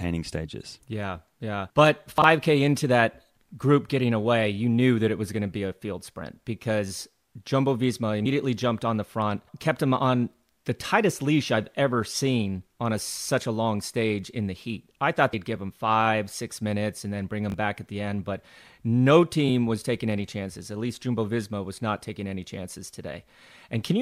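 At 2.18 to 2.24 s, just before "into that group getting", chunks play out of order. One 20 ms chunk arrives two chunks late. The hard joins give a brief jumbled stutter.

At 8.24 s, before "jumped on the front", and again at 15.32 s, compressed frames are skipped. Roughly two frames, about 50 ms of audio, are gone. The jump fits a 26.1 ms frame length.

At 17.5 to 17.54 s, chunks are out of order again. After "minutes and then bring", a 20 ms chunk plays one chunk late, before "back at the end". It makes a quick garbled moment.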